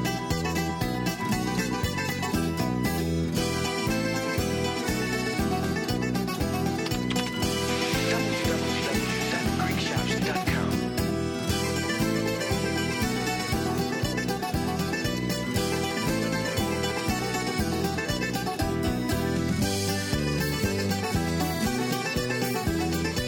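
Nothing in the signal points to a technical fault at any moment in the recording.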